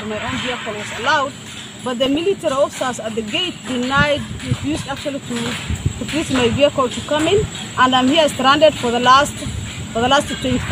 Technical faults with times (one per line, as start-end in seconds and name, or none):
2.06-2.20 DAB burbling
4.60-4.80 DAB burbling